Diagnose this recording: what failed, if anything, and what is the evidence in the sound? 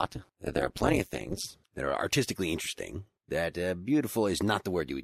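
Overlap-add ripple, 0 to 1.45 s: a frame-based processing stage rejoined unevenly overlapping windows, so level dips about 60 dB roughly 200 times a second, producing a metallic buzz.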